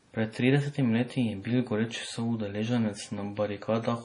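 Throughout, heavy MP3 compression likely dulls the speech: nothing survives above about 10.6 kHz, and watery, swirling artefacts and chirpy s sounds fit a bitrate near 32 kbps, not plain filtering.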